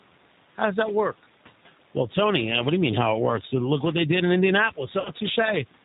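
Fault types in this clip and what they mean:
Noise suppressor artifacts: A noise suppressor is estimating the steady background and pulling down each frequency band it judges to be noise, frame by frame, by about 12 dB. The room noise, which sits about 20 dB below the speech, drops away in pauses and creeps back under the speech.
G.729 codec: The speech has passed through a low-rate model-based coder whose sound points to G.729 at 8 kbit/s. It rebuilds the voice from a vocal tract filter, a pitch predictor and a few pulses per frame. Nothing above 4 kHz survives, so the audio is band-limited and muffled at the top. The codec damage is plainly audible as a rough, slightly synthetic quality, and the background picks up a warbling edge.
VoIP packet loss concealed by the speech codec: Packets failed to arrive between 5.00 and 5.10 s, a gap of about 50 ms that fits five 10 ms frames. The decoder filled it by repeating its last pitch and filter settings at falling gain. 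The speech there smears into a stretched sound that fades rather than cutting to silence, and it stays weak or distorted until the codec recovers.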